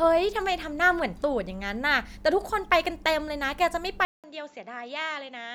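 At 4.05 s the speech drops out for about 190 ms, then returns duller and roughly 10 dB quieter, nothing above 7.6 kHz, with new background noise about 35 dB below the speech. Likely an input switched to a poorer device.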